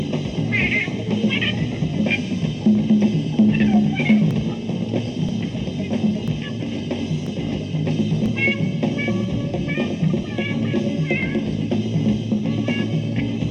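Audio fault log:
4.31–11.23 s, periodic USB or driver dropouts: About seven short gaps, roughly 10 ms each, repeat every 0.99 s. The lost audio is skipped, not filled. Each skip joins the waveform abruptly, so it sounds like a regular tick. Something is blocking the audio path on a fixed schedule.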